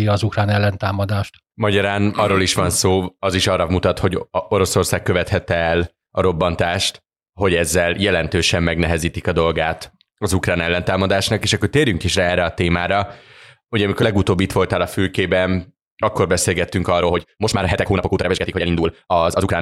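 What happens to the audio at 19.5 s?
At 19.5 s the speech sounds rushed, part of a time-stretched section running from 16.99 s to the end at 19.61 s, right after "a fülkében akkor beszélgettünk". The pace jumps to about 1.82 times normal while pitch stays put, likely because software squeezed the passage by dropping short slices of audio.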